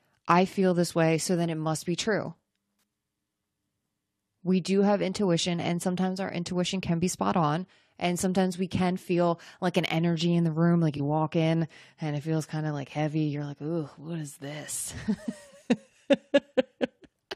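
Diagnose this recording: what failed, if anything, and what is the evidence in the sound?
At 10.97 to 11.00 s, about 34 ms long, one frame of the speech is hit. This is a corrupt frame concealed at the codec stage: bit errors damaged one stretch of the AAC stream, the decoder flagged it, and it covered the gap itself with a muted or scrambled stand-in. The span's length fits a single lost frame.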